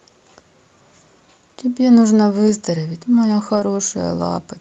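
A brief rough, noisier patch at 2.47 to 2.49 s, and a longer one from 3.55 to 3.61 s, is a lost packet rebuilt from error correction. The 20 ms and 40 ms fit one and then two lost packets, each replaced by a low-bitrate copy carried in the following Opus packet.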